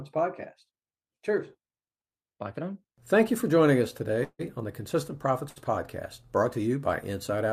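At 4.23 s, right after "you for joining us", the speech halts in a call audio freeze lasting to 4.41 s. The last sound carries on as a fading buzz or hiss, then about 40 ms of silence. Packets were likely delayed and the jitter buffer ran dry. Speech resumes at "on the" with nothing lost, just a 0.16 s gap.

At 5.49 s comes a short stall from a late packet, ending at 5.58 s. One sound is held about 70 ms too long, with a slight buzz or dip. The packet arrived late, so the receiver stretched the previous sound. Nothing is missing.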